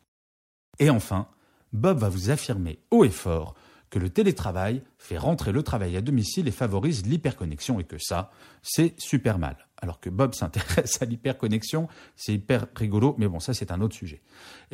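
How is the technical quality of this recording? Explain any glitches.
The recording has one clear glitch: a Bluetooth SBC bit pool drop from 5.79 to 8.15 s. Across those 2.4 seconds the speech turns dull and gritty, then snaps back to full clarity. The degradation points to the bit pool falling from around 31 to around 14, roughly 99 kbps. Starved of bits, the encoder gives the top sub-bands few or no bits and quantises the remaining bands coarsely. On a spectrogram the energy above several kHz thins out in a flat-topped block, with speckled noise filling the lower bands until recovery.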